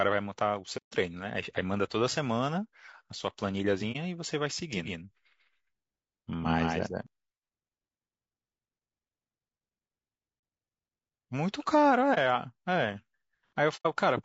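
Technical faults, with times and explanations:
throughout, low-delay AAC compression: The speech sounds rough and grainy, with a hiss-like fill between harmonics and a thin, artificial top end. This is likely a low-delay AAC-ELD encode at about 32 kbps, where short frames resolve pitch poorly and leave too few bits.
0.77–0.94 s, 3.92 s, 10.40 s, 12.14 s and 13.76–13.86 s, AAC frame loss with muting: The sound fades into soft-edged silent gaps. The longest gap is 150 ms at the start and 90 ms near the end, and the rest are about 30 to 40 ms. Whole AAC frames were lost and zeroed, and the overlapping windows smooth the edges.
4.73–7.07 s, doubled audio track: A second, equally loud copy of the speech trails about 150 ms behind, with no reverb tail or room colour. It starts and stops abruptly. This is likely the same signal mixed in twice through a slower capture path.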